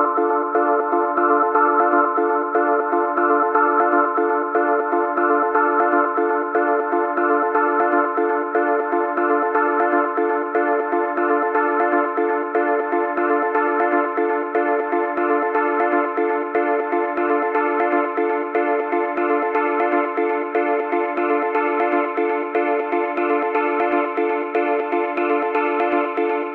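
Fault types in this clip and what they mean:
No faults can be heard anywhere in this audio.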